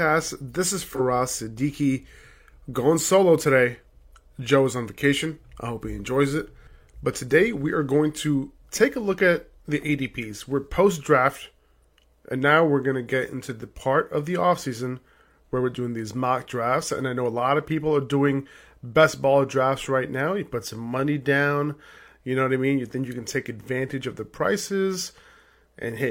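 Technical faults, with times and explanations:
0.88–1.00 s, AAC frame loss with concealment: a brief smeared, noisy or phasey patch interrupts the speech. The decoder apparently lost a stretch of about 43 ms, pointing to a single missing frame, and rebuilt it from the previous good spectrum with scrambled signs or interpolated energy before recovering.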